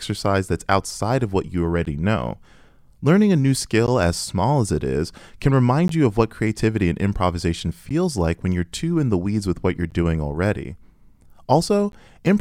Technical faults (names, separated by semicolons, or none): gap between chunks